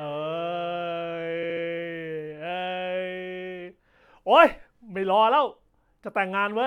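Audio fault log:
1.42–1.63 s, repeated frames: a 69.7 ms block of compressed frames was replayed three extra times, so the speech stutters and runs 209 ms longer.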